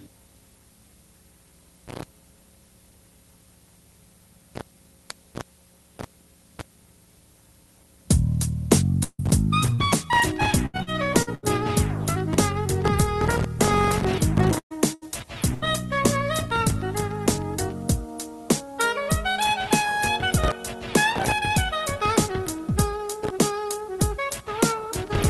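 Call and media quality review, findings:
Long network dropout, 9.03 to 9.21 s: the last sound is carried on, fades, and about 60 ms of silence follows. Audio then resumes with 160 ms gone. Likely cause is network delivery stalling, with the jitter buffer extending 151 ms before muting.

Short concealed packet loss, 9.74 to 9.81 s: a brief smear in the sound. The Opus decoder extended the preceding signal for 34 ms to cover 40 ms that never arrived in time, then crossfaded back into received audio.

Repeated packet loss (robotic sound), 10.66 to 11.46 s: choppy, robotic texture. Five separate gaps, the longest 78 ms, total 240 ms missing. Each hole is patched by continuing the last sound before the next loss arrives. Concealment covers 31% of the span, 248 ms in all.

Burst of packet loss, 14.59 to 14.73 s: held sound decaying into about 80 ms of silence, 118 ms filled, 120 ms missing. Decoder continued the last frame and ramped it down. 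Playback resumes further on.

Burst of packet loss, 14.94 to 15.05 s and 15.54 to 15.65 s: each a short held, fading tail, 70 and 77 ms filled for 80 ms missing each. Same concealment mechanism. Band-limiting to 12 kHz throughout, consistent with Opus near 24 kbps.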